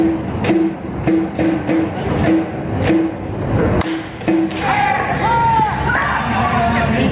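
Gain pumping runs throughout the clip: the level is likely set far too hot for the microphone, so a fast limiter clamps down on every loud sound, swinging the gain by roughly 20 dB. Loud and soft parts end up closer in level, leaving the sound squashed. Through the narrowband call path, nothing reaches above 4 kHz, which fits G.711 mu-law.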